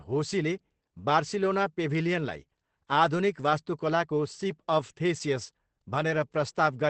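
Opus voice compression, probably at about 12 kbps in SILK mode, cuts everything above 8.4 kHz and coarsens the excitation, leaving the speech audibly muffled, hoarse and slightly robotic throughout.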